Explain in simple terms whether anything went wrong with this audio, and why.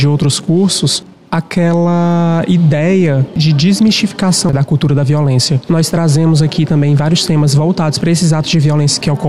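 Nothing went wrong here.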